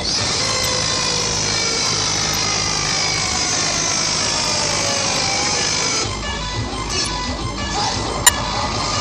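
Short blips of corrupt frame decoded at 0.64, 2.32–2.35, 4.15–4.18, 5.41–5.46, 7.05–7.10 and 8.24–8.33 s, where damaged frames played anyway and spattered misplaced energy, the loudest near about −5 dBFS.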